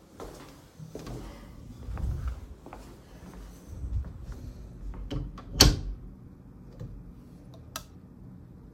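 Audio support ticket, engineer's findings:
No faults found on listening.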